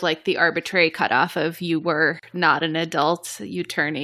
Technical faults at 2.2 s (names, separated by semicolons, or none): gap at a join of encoded pieces